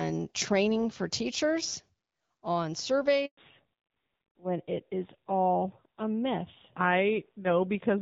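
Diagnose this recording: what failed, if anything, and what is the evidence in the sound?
Network stage: a handover gap. After "training for teachers on", speech goes silent from 3.25 to 3.37 s. No frames arrived during that 120 ms switch.

Codec stage: fallback to narrowband. From 3.37 s onward, nothing remains above 4 kHz. The speech sounds duller, consistent with HD Voice dropping to AMR-NB.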